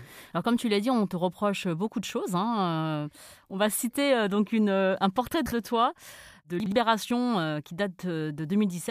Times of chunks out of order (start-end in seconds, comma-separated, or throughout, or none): 5.34-5.52, 6.60-6.72